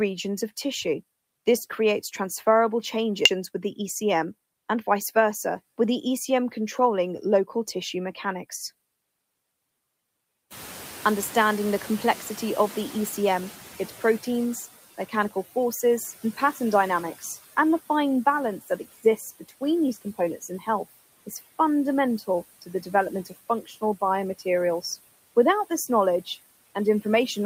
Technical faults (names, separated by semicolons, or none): noise suppressor artifacts; skip ahead; jitter buffer speed-up; noise suppressor catching up; speech cut by the noise suppressor